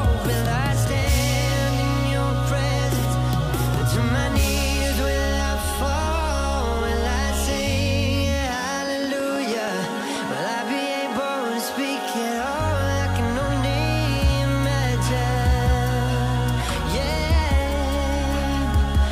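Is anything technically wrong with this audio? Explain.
Yes. From 9.04 to 10.17 s there is a train of clicks: about seven evenly spaced pulses at 6.24 per second, peaking a few dB above the programme. The similar shape and regular pacing point to a likely external source, such as equipment interference or a faulty connection or power supply. It is heard as steady ticking over the sound.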